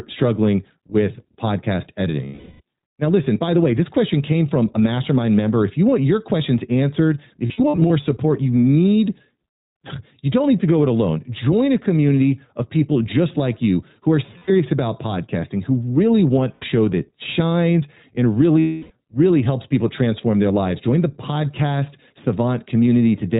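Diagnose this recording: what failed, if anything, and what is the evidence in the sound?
iLBC codec, throughout the speech: a codec-stage fault. The band stops at 4 kHz and the voice has a plainly audible rough, synthetic edge, because each 20 ms frame's excitation is coded independently, a sound that fits iLBC's 15.2 kbps mode.

Lost iLBC frames, a network-stage fault, at 2.26 to 2.61 s after "struggling with podcast", 7.46 to 7.91 s between "want your questions answered" and "support you need" (short scattered runs, about 70 ms at most), 14.38 to 14.51 s, 16.55 to 16.65 s between "podcasting who really want" and "that shines and", and 18.60 to 18.91 s. Each gap becomes a held, buzzy vowel as the decoder repeats the last pitch cycle with noise, and the speech recovers almost immediately afterwards.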